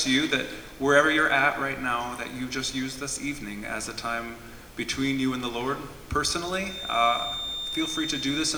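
From 6.58 s to the end there's a feedback whistle, a thin steady tone at 3.6 kHz sitting a few dB under the main sound and swelling and fading slowly in level. It's likely a speaker-to-mic loop hovering right at the edge of howling without tipping over.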